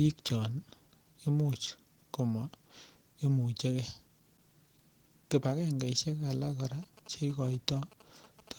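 Throughout the clip the speech has passed through Opus voice compression at 16 kbps in hybrid mode, working in 20 ms frames. The linear-prediction core codes the lower band and a transform layer handles everything above 8 kHz. Both are squeezed into that small budget, so the excitation is coded coarsely. The damage is plainly audible: the speech sounds hoarse and slightly robotic. The band still reaches about 20 kHz, so the fault is roughness and not muffling.

From 6.83 s to 8.49 s, GSM signalling bursts intrude. A nearby 2G phone is exchanging short radio bursts with the network, and the audio circuitry rectifies them into sound. The bursts repeat at about 217 Hz, so they come through as a galloping dit-dit-dit of short buzzes at that pitch. They sit faintly under the speech, roughly 25 dB below it.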